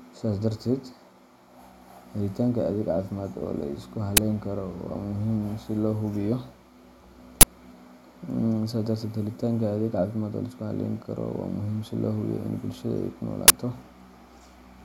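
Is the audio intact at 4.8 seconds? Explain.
Yes, at 4.8 seconds the audio is intact, with no dropout, click, distortion or other fault at that point.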